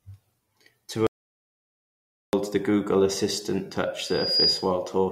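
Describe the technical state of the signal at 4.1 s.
At 4.1 s a loudspeaker feedback squeal is building. It runs from 4.00 to 4.71 s. The microphone is picking up its own loudspeaker, and the loop gain tops unity at 4.9 kHz. That whistle swells over a few tenths of a second to about 5 dB above the speech.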